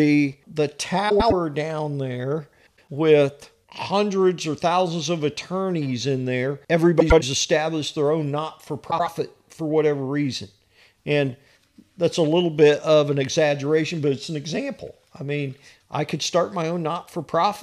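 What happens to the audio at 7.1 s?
Frames out of order from 7.00 to 7.23 s, after "of attorneys in there": two adjacent blocks of about 105 ms play swapped, giving a garbled flutter.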